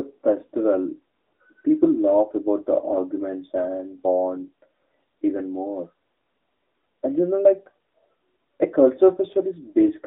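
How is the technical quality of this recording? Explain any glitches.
The technical quality is poor throughout. Throughout, an AMR narrowband mobile codec confines the speech to about 250 Hz to 3.7 kHz, and its pulse-driven vocal-tract model adds a buzzy, synthetic texture that plain band-limiting wouldn't, consistent with an upper mode near 10.2 kbps.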